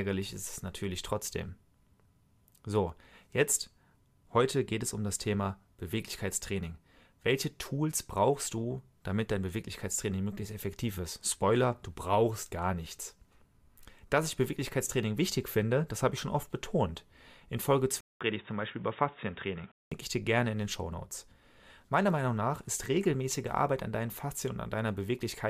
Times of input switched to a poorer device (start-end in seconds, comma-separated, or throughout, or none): 18.01-19.92